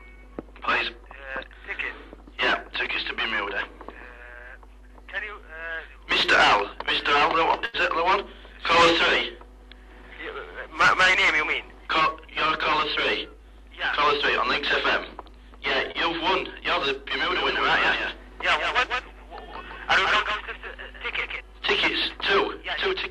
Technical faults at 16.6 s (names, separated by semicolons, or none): none